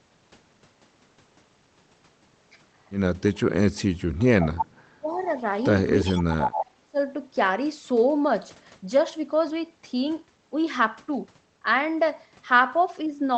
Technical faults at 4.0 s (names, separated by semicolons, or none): speech suppressed in double talk